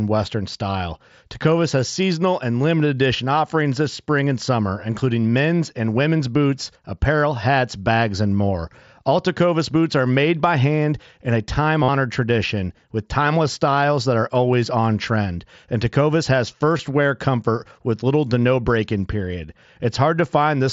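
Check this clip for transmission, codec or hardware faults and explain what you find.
Two short dropouts in this speech are concealed Bluetooth headset packet loss, heard through the light graininess of the mSBC headset link. From 11.83 to 11.89 s, about 52 ms, a buzzy held tone replaces the signal, then warbles as real audio returns, which fits several consecutive lost headset packets. At 16.77 s there is a shorter 15 ms loss of two packets. In both, the receiver filled the gap by repeating the best-matching recent stretch of waveform.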